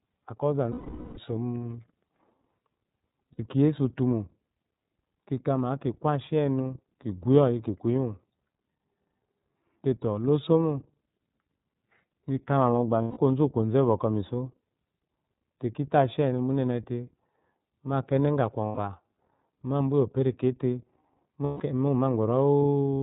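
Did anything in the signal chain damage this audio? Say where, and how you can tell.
Yes. At the codec stage, the iLBC codec runs through the whole clip: nothing above 4 kHz survives, and the speech has a rough, synthetic edge. That graininess is what separates it from simple band-limiting, and it points to the 13.33 kbps, 30 ms frame mode.

On the network side, lost iLBC frames appear at 0.71–1.18 s, 3.33–3.40 s, 13.02–13.18 s, 18.66–18.79 s and 21.44–21.61 s. Each gap is filled with a held, buzzy vowel-like sound rather than silence, and the long first gap fades as it goes. Clean recovery straight afterward marks packet-loss concealment, not a dropout.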